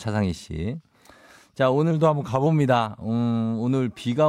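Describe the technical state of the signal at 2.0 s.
A drift correction step runs from 1.91 to 2.46 s. The speech slows by 6.4% and drops 115 cents, just over a semitone, then snaps back to normal speed and pitch. Clock-matching software likely changed the playback rate in one step to rebalance its buffer.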